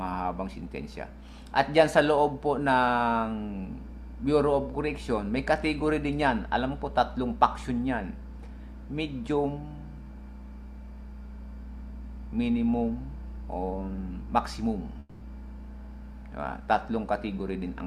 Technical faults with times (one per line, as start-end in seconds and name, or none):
14.99-15.23 long network dropout